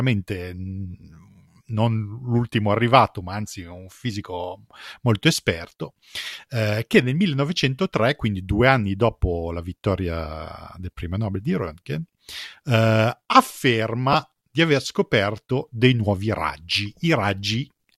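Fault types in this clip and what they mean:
Lost LE Audio frames: Right around 14.13 s there's a brief hole of about 15 ms where Bluetooth LE Audio frames went missing, which fits two 7.5 ms frames dropping out. The LC3 decoder covers the gap by replaying the last good spectrum with its phases scrambled, so instead of a clean dropout you get a short, grainy smear where the speech loses its tonal clarity for a moment and then snaps back.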